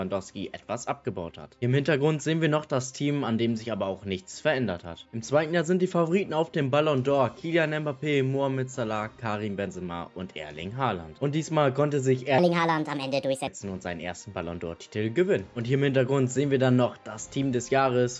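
From 12.38 to 13.47 s, a wrong sample rate plays the audio about 1.38 times too fast, as 16 kHz material run at 22 kHz would, so it sounds hurried and about 5.5 semitones higher.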